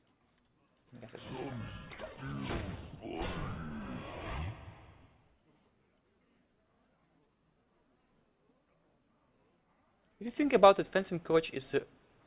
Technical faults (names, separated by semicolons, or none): none